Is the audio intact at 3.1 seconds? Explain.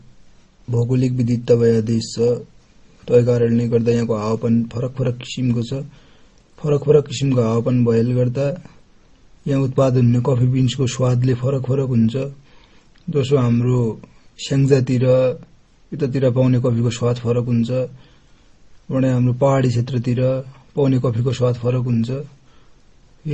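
No. At 3.1 s, as throughout the clip, the speech shows likely transcoding between lossy codecs: smeared, warbly artefacts from a low-bitrate MP3-style stage re-encoded by Opus, which adds its own coding noise. Nothing is present above 12.9 kHz.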